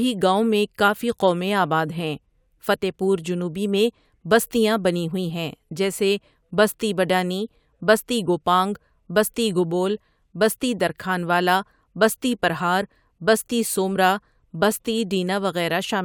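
No technical faults can be heard anywhere in the recording.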